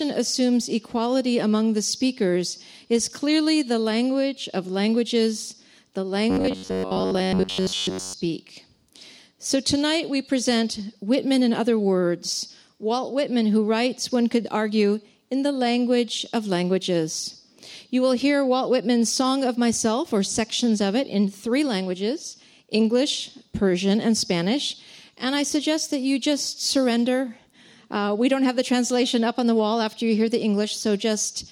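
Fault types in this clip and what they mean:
Robotic sound from repeated short buffers: From 6.30 to 8.14 s the sound collapses into a stiff, metallic buzz locked at 93.8 Hz that still loosely follows the underlying audio. The likely cause is new audio arriving too seldom, so the software keeps replaying its last short slice, which fits a slice about 10.7 ms long. Most of that stretch is filled with these repeats while the real audio in between is skipped.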